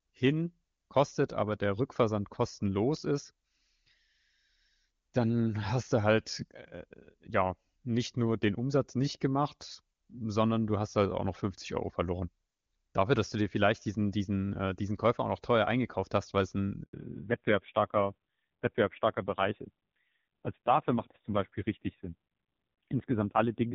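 At 16.83 s a handover gap cuts the speech for 100 ms as the call switches networks. The sound dies quickly to true silence, unlike packet loss, which leaves smeared or repeated fragments. From 16.93 s to the end, a fallback to narrowband replaces the clean HD Voice (AMR-WB) sound with a codec that keeps nothing above 4 kHz. The result is dull and raspy, with a roughness that fits a low AMR-NB rate near 5.9 kbit/s, unlike a simple low-pass filter.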